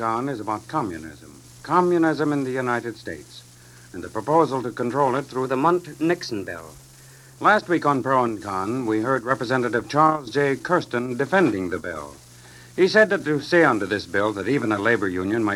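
From 5.45 s to 7.38 s the audio suffers a wrong sample rate fault: samples are clocked out faster than they were captured, with no rate conversion in between. The speed-up of 1.09 times fits material recorded at 44.1 kHz being played at 48 kHz. Because timing and frequency are tied together, everything in that stretch runs about 9% quicker and rises by 1.47 semitones, so the sound becomes briefly brighter, higher and hurried.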